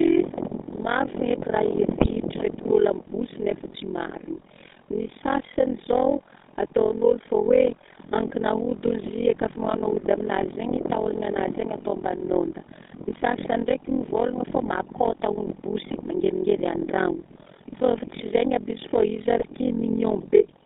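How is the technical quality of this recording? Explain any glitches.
The technical quality is poor. Three faults are audible.

Overlap-add ripple runs through the whole clip. The audio was split into windowed frames and rejoined with overlaps that don't sum to a steady gain. The level swings by about 60 dB around 40 times a second. That gives a harsh, robotic flutter.

The GSM full-rate codec also affects everything. The sound is squeezed into a band of roughly 200 Hz to 3.7 kHz, which fits a 13 kbps GSM link. The coder rebuilds the voice from a vocal-tract model fed by sparse, evenly spaced pulses. The result is buzzy and gravelly.

GSM bit errors strike three times: 2.01 to 2.10 s, 14.81 to 14.91 s, and 19.39 to 19.45 s. Corrupted bits reached the decoder and scrambled its filter, pitch and gain values for a few frames. Each burst breaks into squawks, pops and gargling.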